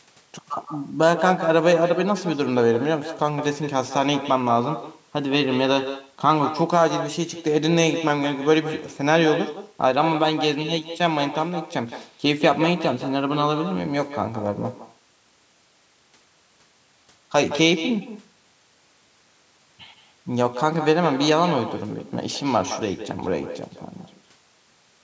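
From start to finish, the speech is shadowed by an echo with no canceller: a distinct, thinner copy arrives around 150 ms later at about 10 dB down, looped back from a far-end loudspeaker. Unlike room reverberation, it is a separate repeat rather than a smooth decaying tail.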